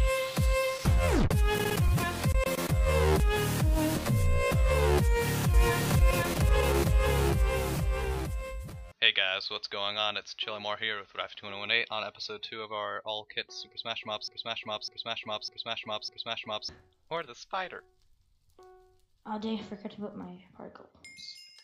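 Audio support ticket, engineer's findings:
Doubled audio track, 5.54 to 8.92 s: a full-band copy at roughly the same level trails by about half a second, with no decay, and it cuts in and out abruptly. Likely a second capture via a slower path, or an edit holding two copies out of step.

Broken-record loop, 14.28 to 16.69 s: a 602 ms fragment plays four times back to back, identical each pass. Likely a stalled player, encoder or stream resending its last buffered piece. Whatever should have played there is gone.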